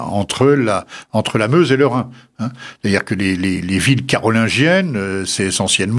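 Nothing stood out as a technical fault on listening to this speech recording.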